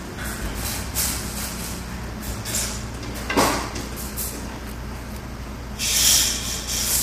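From the start the sound has a rough, grainy texture, with noise filling the gaps between harmonics and a top end that feels thin and synthetic. That's most likely low-delay AAC compression, AAC-ELD at something like 32 kbps, whose short frames can't resolve pitch detail cleanly.

At 0.56 s and again at 5.12 s there's a single sharp click, probably from dropped samples. A fraction of a millisecond goes missing, so the waveform jumps abruptly to a later value. It's too brief to lose any sound, just a hard tick.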